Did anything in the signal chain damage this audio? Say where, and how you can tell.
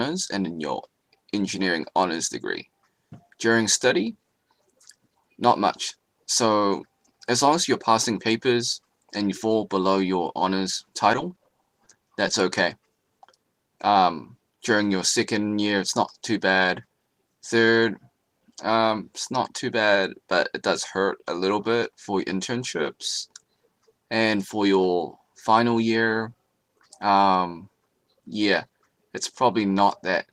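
Yes. The damage happened on the network. At 10.34 to 10.36 s a short concealed packet loss left about 10 ms of audio that never reached the decoder in time. The receiver covered the hole by extending the sound that came just before it and then cross-fading back into the real signal. You hear a tiny smear or wobble at that moment, and whatever fell inside the gap is gone.

From 10.90 to 12.33 s the network failed again and again, producing repeated packet loss with a robotic sound. There are sixteen separate gaps, none longer than 20 ms. Together they add up to 170 ms of missing audio, so about 12% of that stretch is concealment. Each patch extends the previous sound, and the next gap arrives before the decoder has recovered. The result is choppy audio with pieces missing.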